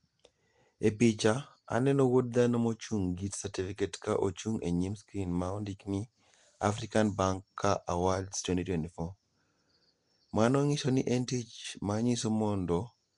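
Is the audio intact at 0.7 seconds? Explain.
No. At 0.7 s, as throughout, the speech shows Nellymoser compression, likely from the Nellymoser Asao codec at a rate fitting 44 kbps. Coarse coding of short blocks fills weak bands with noise, so the speech sounds plainly rough, hissy and smeared, with nothing above 10.6 kHz.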